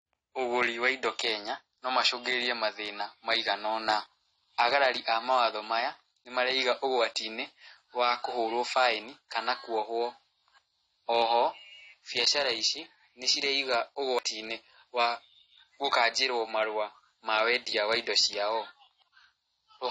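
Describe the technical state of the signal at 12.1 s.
At 12.1 s the speech sounds dull and smeared, with a watery, fizzy edge on sibilants and nothing above 10 kHz, as throughout the recording. The likely cause is AAC compression, with a bandwidth cut and coarse quantisation that fit about 32 kbps.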